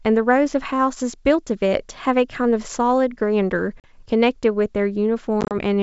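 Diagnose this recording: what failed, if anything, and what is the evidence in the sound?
The network dropped packets on an ADPCM call. At 3.80 to 3.92 s, about 40 ms of speech vanishes into a hard-edged silent gap, roughly four packets' worth. At 5.41 to 5.54 s, about 70 ms goes missing in scattered holes across 100 ms, the longest run 30 ms. Each gap is filled with silence. The receiving decoder's adaptive predictor and step size lose track of the sender's, so speech returns slightly distorted before settling. The G.722 wideband coding itself carries faint or no damage.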